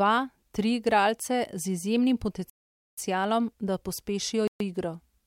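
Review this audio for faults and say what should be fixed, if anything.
Speech drops to silence at 2.50 to 2.98 s and 4.48 to 4.60 s, then resumes: likely a Bluetooth stall, the headphone buffer emptying while resent packets were delayed. Keep the phone close to the headphones and away from Wi-Fi routers and other 2.4 GHz sources to reduce interference.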